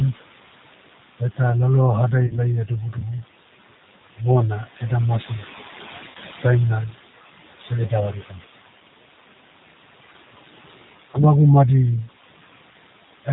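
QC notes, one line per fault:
Throughout: noise suppressor artifacts. The background is pulled down by about 17 dB between phrases, then swells back under the speech. The room noise, about 11 dB below the speech, is what the suppressor keeps chasing frame by frame.
Throughout: G.729 codec. Speech is band-limited to 4 kHz and has a rough, slightly synthetic edge, plainly audible, from an 8 kbit/s codec that rebuilds each 10 ms frame from a vocal tract filter, pitch predictor and a few pulses.
2.27 to 2.39 s, 6.09 to 6.17 s, 11.11 to 11.20 s: VoIP packet loss concealed by the speech codec. Each gap turns into a short, fading stretch of sound as the decoder extrapolates from its last pitch and filter. The losses behind them are about 30 ms, 60 ms and 30 ms, consistent with one, two and one lost packet. The damage outlasts the lost audio because each frame builds on the previous one.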